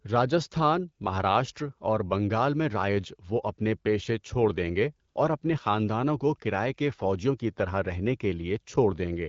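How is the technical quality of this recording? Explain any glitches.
The recording has one brief glitch, an AMR comfort noise gap. The band-limited, slightly coded character of the audio fits an AMR wideband (HD Voice) link at around 12.65 kbit/s.

From 5.09 to 5.15 s, about 60 ms, the sending phone decided the speech had paused and stopped transmitting speech frames. The receiver filled that stretch with synthetic noise built from a rough estimate of the background's level and spectral shape. It sounds like a short, flat hiss replacing the real room sound. On a spectrogram it shows as a smooth, featureless band with no harmonic detail, starting and stopping abruptly. On the waveform it is a low-level, even patch.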